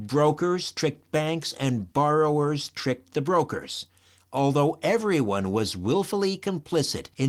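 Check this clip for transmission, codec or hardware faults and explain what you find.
Nothing stood out on listening to this speech recording, so there is no fault to report.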